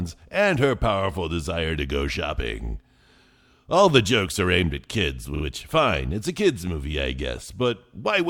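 A speech recording with a stutter from repeated frames between 5.35 and 5.43 s, just after "are aimed at kids" and before "fine it's a kids'". A 40 ms block of compressed audio plays two extra times, which fits a pair of 20 ms frames being written or sent again, so the decoder replays the same short stretch. The repeats add 80 ms to the running time at that point.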